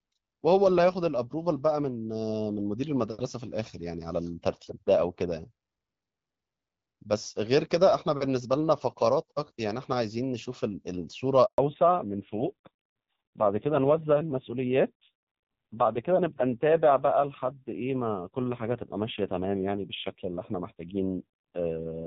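Up to 11.46 s the speech carries the light codec texture of HD Voice, consistent with AMR-WB at 12.65 kbit/s. At 11.46 s a handover gap begins: the call is passed from one network to another, no speech frames arrive, and the sound fades within a few tens of milliseconds into true silence lasting 120 ms, until 11.58 s. A burst of packet loss would more typically be patched with smeared or buzzy concealment. This one is a clean hole, and the sound that resumes has a different character.

That change is a fallback to narrowband, which starts at 11.58 s and lasts to the end of the clip. The call has dropped from the wideband codec to an older narrowband one, so everything above 4 kHz is gone. Sibilants lose their crispness and the speech turns duller and rougher, which fits AMR-NB at a low rate around 5.9 kbit/s. A plain low-pass filter would remove the top band but leave the speech smooth. 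Here the raspy coding texture arrives along with the missing highs, and neither recovers.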